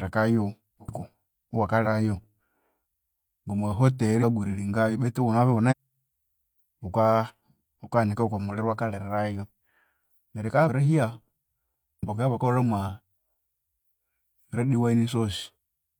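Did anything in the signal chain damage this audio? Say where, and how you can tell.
Yes: compressed frames skipped at 0.84, 1.81, 4.18 (before "grillingayo betu"), 5.67, 10.64 and 11.99 s. At the codec stage, whole 46.4 ms frames went unplayed, so speech jumps ahead by about a third of a second (once a fifth, once a tenth).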